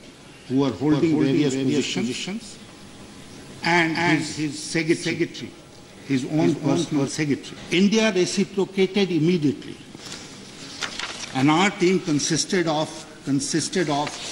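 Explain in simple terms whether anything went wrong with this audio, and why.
Two things go wrong. From 0.92 to 7.08 s there is a doubled audio track: a second, somewhat quieter copy of the same sound plays about a third of a second behind the first, likely because the audio was picked up twice along paths of different speed. Unlike a natural echo, the copy never fades away or sounds roomy. It stays just as clear the whole time, then starts and stops suddenly at those two points.

At about 7.53 s there is a stream segment skipped: the sound jumps forward with a tiny blip, and a chunk of the programme simply never plays. The likely cause is that one piece of the streamed audio failed to load, so the player moved straight on to the next piece. What sets this apart from an ordinary dropout is that you hear no silent gap to wait through. The audio just leaps ahead, and part of it is gone.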